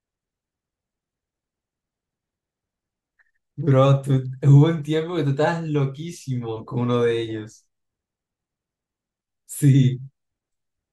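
Listening to this speech recording, nothing technical stood out as wrong at any point.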